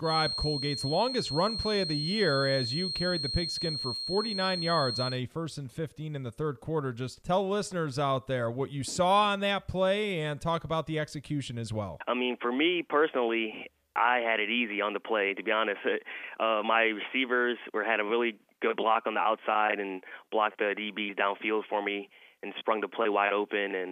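From the very start until about 5.22 s, a thin, steady whistle at 4.2 kHz sits behind the sound, only a little quieter than it, and its level swells and fades slowly as it holds. This is a feedback whistle. It is likely that sound from a loudspeaker was reaching the microphone with enough gain to sit just at the edge of feedback, so a single high tone kept ringing on without building into a runaway howl.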